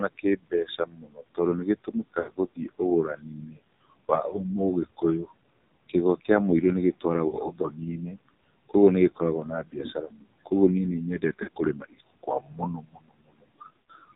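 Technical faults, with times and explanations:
Throughout, AMR narrowband mobile codec: speech sounds buzzy, synthetic and boxed-in, nothing above 4 kHz, as a 5.9 kbps narrowband coder models the voice with sparse pulses.
Throughout, noise suppressor artifacts: background noise falls by about 21 dB between phrases and swells under them, because bands judged steady noise are lowered frame by frame.
2.2 s, 7.28 s, 11.44 s and 13.86 s, lost AMR speech frames: brief warbles or smeared, fading sound lasting 40 to 80 ms, after "mũirũ nĩ" at 7.28 s, as the decoder repeats the last good settings with falling gain.
5.89–6.29 s, 7.01–10.52 s and 11.19–14.05 s, speech cut by the noise suppressor: consonants and word endings sound swallowed, before "mũirũ nĩ" and after it, dipping by up to about 22 dB, because the suppressor mistook speech for noise.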